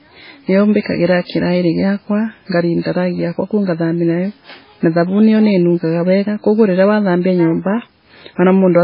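Throughout the speech, heavy MP3 compression is the likely cause of the damage: nothing survives above 5.2 kHz, s sounds lose their edge, and weak detail flickers between frames into a watery, swirling texture with smeared onsets, which fits a very low bitrate near 16 kbps.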